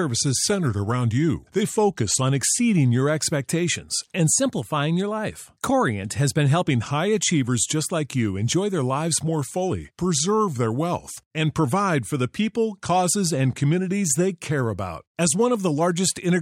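Drift correction steps at 0.44–2.22 s, 4.36–6.66 s and 9.28–11.37 s: the speech lurches about 6% slower and a semitone flat, then 6% faster and a semitone sharp, then slower again, each snapping back, likely from clock-matching software rebalancing its buffer.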